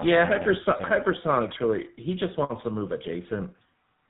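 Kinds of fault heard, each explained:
Tandem speech coding: the speech passed through two speech coders in a row, each re-coding the other's already damaged output, pointing to something like iLBC then GSM full rate. Unlike one low-rate codec, it sounds rougher and more warbly, and nothing remains above 3.8 kHz.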